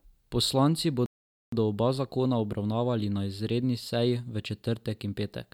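At 1.06 s the speech cuts off mid-flow and the output falls completely silent for about 0.46 s, until 1.52 s, when sound returns. This is a playback stall: the gap is a hard dropout rather than a fade, and it lasts a noticeable time. The likely cause is the player running short of buffered data, or its audio thread being blocked, so nothing reached the output until it recovered.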